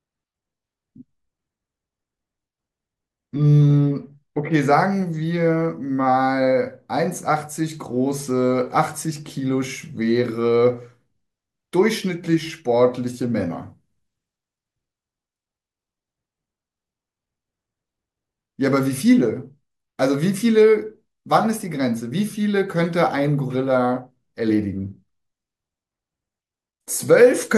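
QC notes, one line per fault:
Nothing to flag on this one, no faults turned up anywhere in it.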